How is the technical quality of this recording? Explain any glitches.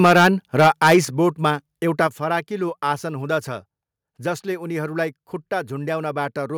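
The quality is compromised early on by clipping and then a series of abrupt level drops in the opening couple of seconds.

Microphone overload shows up from 0 to 0.28 s and again from 0.59 to 0.98 s. The peaks hit the converter's ceiling, about 9 dB and about 10 dB over, and get flattened. Roughly a tenth of the samples are clipped in the first stretch and a bit fewer in the second. That squared-off top gives the loudest parts of the speech a harsh, crackly edge. The likely cause is the mic input simply being set too hot.

The microphone volume is stepped down at 0.06 s by about 2 dB, at 1.05 s by about 6 dB and at 2.07 s by about 5 dB. Each is a sudden one-step drop where speech and background fall together. The likely cause is the call software reacting to the overload and cutting the device gain, and the drop at 1.05 s lands just after the second clipped stretch.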